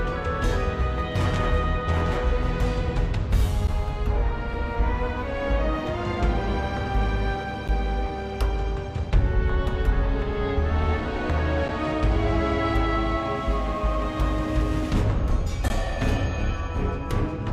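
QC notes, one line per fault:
3.67, 7.68, 11.68 and 15.68 s, gap between stream segments. Short holes of silence, 7 to 18 ms, cut in with hard edges. They recur every 4 s, which fits 4-second segments whose timestamps leave small gaps. The player fills them with silence. No audio is lost.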